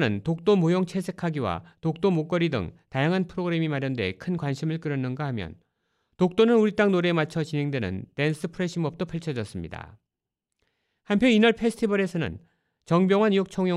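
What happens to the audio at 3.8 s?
Nothing goes wrong at 3.8 s; the speech continues intact through that moment with no dropout, click or distortion.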